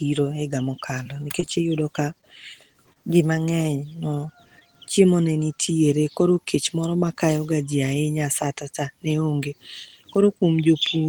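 Repeated packet loss (robotic sound) runs from 1.03 to 1.49 s. Five gaps in quick succession, none longer than 18 ms, are each patched by continuing the last bit of speech, so about 63 ms is synthetic and about 40 ms of real audio never arrives. That is roughly a seventh of the stretch. The result is choppy speech with small pieces missing.

A short stall from a late packet comes at 2.21 to 2.25 s. One packet arrived late, the jitter buffer emptied, and the receiver held the current sound for 16 ms until the packet turned up. Playback then resumed from where it stopped, so nothing is lost. The sound is briefly drawn out with a faint buzz, and the delay shifts by 16 ms afterward.

Short concealed packet loss occurs twice. At 2.93 to 2.97 s, 20 ms of audio failed to reach the decoder in time. The receiver extended the preceding sound for 26 ms and blended back, leaving a small smear or wobble. 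At 4.59 to 4.63 s, just before "chiemo ne nitiere", another 20 ms is lost and only 13 ms is filled. The concealment there is briefer, and part of a short sound can drop out.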